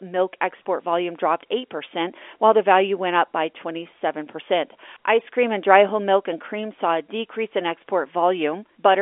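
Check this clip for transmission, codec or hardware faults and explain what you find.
No faults found here.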